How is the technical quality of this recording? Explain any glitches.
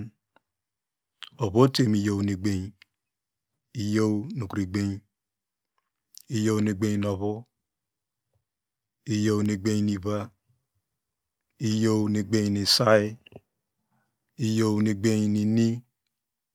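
Nothing stood out on listening to the recording, so there are no glitches to explain.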